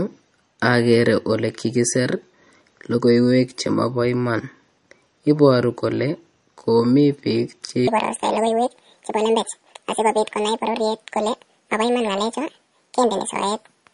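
From the start, the speech carries what is most likely MP3 compression at a low bitrate, consistent with roughly 40 kbps. Nothing is heard above 10.6 kHz, where the encoder has cut the treble, and weak frequency lines drop in and out between frames. This gives a watery, swirling quality, chirpy sibilants and smeared consonant onsets. That flickering texture sets it apart from a plain low-pass filter, which would dull the sound without the swirl.

At 7.88 s the speech jumps to about 1.79 times normal speed and stays there until the end at 13.93 s. This section at the wrong speed, likely from playback against the wrong clock, raises the pitch by roughly ten semitones along with the tempo, so the voice turns high and hurried. Because pitch and timing shift together, it is distinct from time-stretching, which would speed delivery but keep the pitch.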